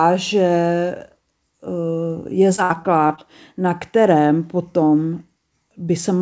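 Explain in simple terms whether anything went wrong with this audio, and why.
Short concealed packet loss: at 2.56, 3.08 and 3.16 s, about 20 ms of the call arrived too late, so the receiver filled each hole by extending the sound before it. You hear a quick smear or wobble; the last two come just before "na kterém potom".

A burst of packet loss from 2.64 to 2.72 s dropped about 60 ms in a row. The receiver held and faded the last sound, then the speech jumps ahead with that piece missing.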